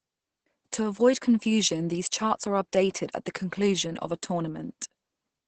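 Throughout the speech, Opus voice compression at a low rate is audible. Nothing is present above about 8.7 kHz, consistent with a wideband SILK mode, and the damage is heavy: the linear-prediction coder is modelling the excitation with very few bits, so the voice comes out muffled, hoarse and slightly robotic. That level of degradation points to a bitrate around 10 kbps, coded in 20 ms frames.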